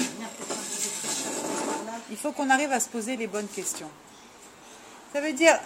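Throughout, sample clock jitter of roughly a microsecond or two mistimes samples, adding hiss about 30 dB down that roughens loud, bright passages.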